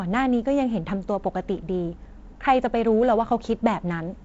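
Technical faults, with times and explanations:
No technical faults are present: the speech carries the light character of G.722 wideband telephone coding at 48 kbit/s, with content reaching up to about 7.7 kHz and nothing above.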